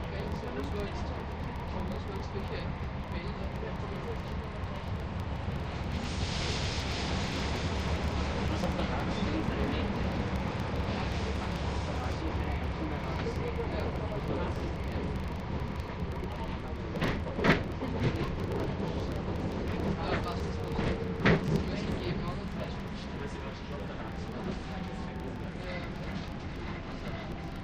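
From start to end, a filter restarted on every block leaves a 25 Hz buzz. Each 40 ms block starts from silence, ticking. The buzz tracks the level of the sounds.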